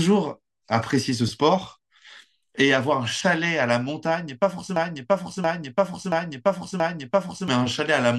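Speech, with a broken-record loop from 4.76 to 7.48 s: a 0.68 s fragment repeats exactly four times back to back, replacing the speech that should follow. A spectrogram shows identical blocks tiling that span. A stalled player or stream likely resent its last buffer.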